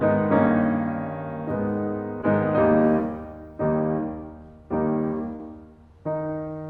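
Short concealed packet loss hits this music clip at 2.21–2.25 s, 2.97–3.00 s and 5.36–5.41 s. Each time about 20 ms of audio arrived too late, and the receiver extended the preceding sound before blending back, leaving brief smears, the last one longest.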